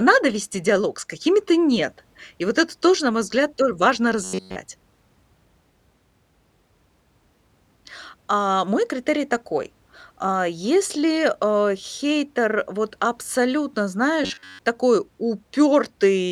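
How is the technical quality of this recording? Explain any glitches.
The recording has two brief robotic glitches of the same kind, robotic sound from repeated short buffers. The first comes right after "мой взгляд тоже важно", from 4.24 to 4.57 s, where the whole stretch is affected. The second follows "а хейтер вот абсолютно", from 14.24 to 14.59 s, where most of the stretch is affected. Both turn the speech into a rigid metallic buzz at 93.8 Hz. That pitch fits a segment of about 10.7 ms being replayed over and over, likely because fresh audio was arriving too slowly while the real signal was skipped. Unlike a dropout or a warble, the speech never goes silent or wavers, and the buzz holds one fixed pitch while the syllables only loosely show through.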